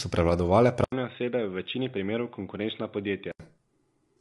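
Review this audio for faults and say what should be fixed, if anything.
The whole clip went through low-delay AAC compression, likely AAC-ELD at around 32 kbps judging by the sound. Its short frames resolve the harmonics poorly, leaving the speech rough and grainy, with nothing above 11.6 kHz. Encoding at a higher bitrate would prevent this.

Just after "so prevladovale", the input switched to a poorer device, likely a headset or secondary microphone. From 0.84 to 3.40 s there is an 80 ms gap at the switch, then duller, boxier sound cut off above 3.8 kHz. The level is about 10 dB lower, with a faint new background noise. Locking the recording to one input device would prevent this.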